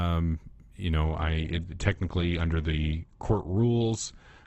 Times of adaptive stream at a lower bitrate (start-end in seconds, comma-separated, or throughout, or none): 1.04-4.47